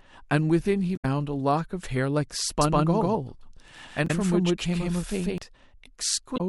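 A speech recording with two technical faults. Damaged data in a compressed stream disrupts the audio at 0.93–1.05 s, 4.04–4.11 s and 6.34–6.40 s. At each one the decoder misreads corrupted frames, loses sync and hunts for the next valid header. From 2.61 s to 5.38 s the speech is heard twice, making this a doubled audio track. A second full-band copy trails about 150 ms behind at roughly the same loudness. It starts and stops abruptly, with no decay tail and no room colouring, which rules out a real echo or reverberation. The likely cause is the same audio being captured again through a slower path, or an edit that left two misaligned copies layered together.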